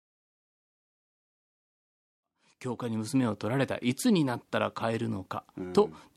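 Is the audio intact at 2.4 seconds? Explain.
Yes, the audio is intact at 2.4 seconds: the speech there is part of a smooth fade-in, with the level rising gradually and no click or hard edge.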